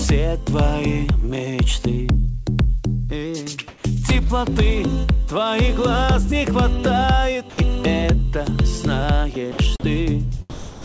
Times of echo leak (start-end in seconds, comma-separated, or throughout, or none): none